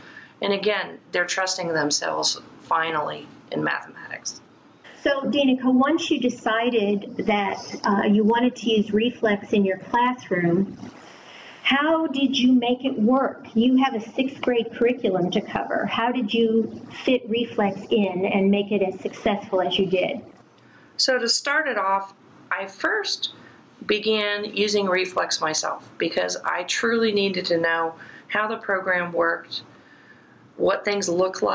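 Gain pumping runs throughout, swinging by roughly 25 dB. This is likely caused by gain set far too high with a fast limiter clamping it. Unlike a noise gate, the background rises rather than dropping to silence. The call processing leaves nothing above about 8 kHz.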